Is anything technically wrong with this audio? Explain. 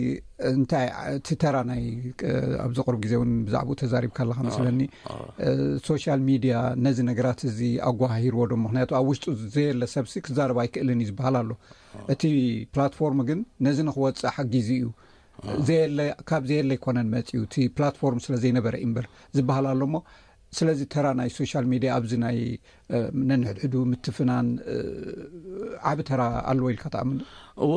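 No, nothing technically wrong is audible here.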